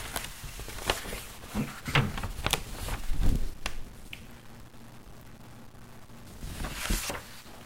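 From start to finish, the sound carries a grainy grit, and the quiet gaps fill with a hiss-like noise rather than falling silent. This points to a stuck bit, likely one converter or data line held at a fixed value, so roughly half the samples are offset by a step of about -45 dBFS. On a spectrogram, broadband energy smears across the quiet stretches; on the waveform, low-level sections show a small, square-edged offset that flips with the signal's sign.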